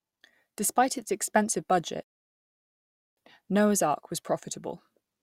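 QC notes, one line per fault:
2.03–3.17 s, rebuffering stall: the player drained its store of downloaded audio and had nothing left to play, so it halted and waited for more data to arrive before carrying on. In the speech this is heard as an abrupt drop to silence lasting about 1.14 s, after which the talker picks up at exactly the point where they were cut off. No speech is skipped, but the pause adds that time to the clip.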